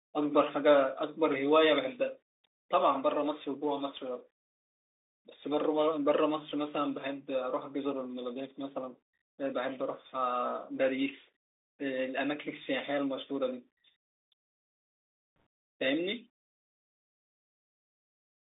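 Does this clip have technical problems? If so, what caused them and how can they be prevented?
Yes, the speech runs through a Bluetooth CVSD headset codec for the whole clip. Everything sits in a narrow 300 Hz to 3.7 kHz band, and because CVSD sends one up-or-down bit per sample at 64 kbps, fast loud highs outrun its step size, leaving scratchy sibilants and a grainy hiss underneath. Using a wideband mSBC or LE Audio headset profile, or a wired mic, avoids this.

There's also a brief burst of bit errors on the Bluetooth voice link at about 15.40 s. Since every CVSD bit only nudges the waveform slightly, flipped bits, at a rate of around one percent, come through as a short rushing crackle rather than a sharp click. Keeping the headset close to the receiver and away from Wi-Fi congestion prevents it.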